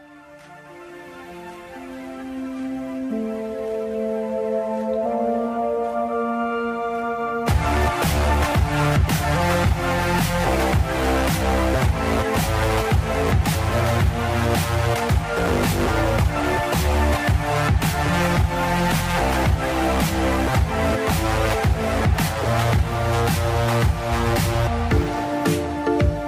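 Nothing technically wrong turns up anywhere in this audio, so there's no fault to point to.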